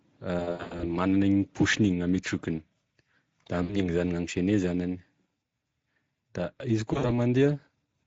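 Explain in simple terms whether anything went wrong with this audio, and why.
A couple of things went wrong. The whole clip carries Speex codec damage: this older VoIP speech codec is squeezing the speech hard enough that it sounds noticeably hoarse and grainy, with a slightly artificial, noisy edge instead of clean voice detail.

There's also VoIP packet loss concealed by the speech codec, at 0.39 to 0.93 s, 3.63 to 3.78 s and 6.93 to 7.11 s. Chunks of audio went missing, and the decoder filled each gap by stretching the last sound into a fading smear. The speech stays weak for a moment afterwards.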